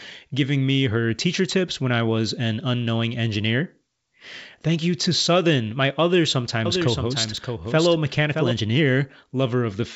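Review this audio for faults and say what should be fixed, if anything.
Right after "my other", from 6.65 to 8.51 s, there's a doubled audio track: a full-band copy about 5 dB down, trailing by roughly 0.7 s, cutting in and out abruptly. That's likely a second, slower capture path or an out-of-step edit. Mute the duplicate path or remove the stray copy.

At 7.37 s there's a repeated buffer: a tiny slice plays three times with hard joins, heard as a click or brief buzz, which fits a 64-sample buffer not refilled in time. Give the playback device a larger buffer or more scheduling headroom.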